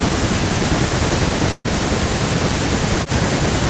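From 0.47 s to the end, an echo canceller likely mistook this talker for loudspeaker echo while the far side was also speaking. This is speech suppressed in double talk: the speech dips repeatedly, at worst by about 40 dB, thinning and breaking into pieces.

From 1.51 to 1.66 s, a burst of packet loss left the receiver without audio, so it stretched the last sound for about 130 ms, fading it, then about 30 ms of silence. About 140 ms of speech is missing when playback resumes.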